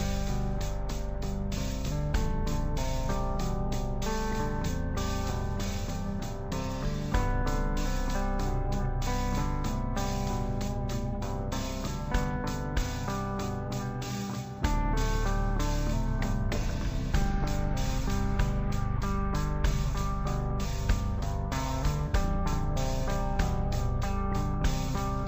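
From start to finish the audio plays at half speed and a full octave low, the signature of stereo read as mono. The left and right samples, stored alternately, were taken in sequence as one channel, so every pair of samples stretches time by a factor of two. A plain sample-rate mismatch would also slow and lower the sound, but here a fainter mirrored copy fills the upper half of the spectrum, which gives the interleaving away.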